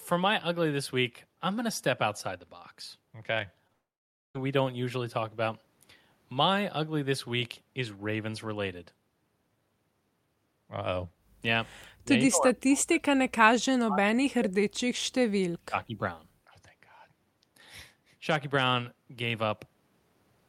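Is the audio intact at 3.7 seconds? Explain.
No. At 3.67 to 3.71 s there's a short concealed packet loss. About 20 ms never reached the decoder in time, so the receiver patched the gap by extending the previous sound, which leaves a brief smear or wobble. Right after, from 3.73 to 4.36 s, the sound stretches into a fading buzz or hiss, then drops to about half a second of silence before coming back with that stretch gone. That's likely a long network dropout.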